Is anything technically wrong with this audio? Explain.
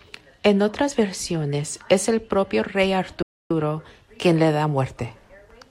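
Yes. At 3.22 s, right after "es el propio rey", there is a playback stall. The player likely ran short of data, so the speech cuts to silence for about 280 ms before continuing at 3.51 s.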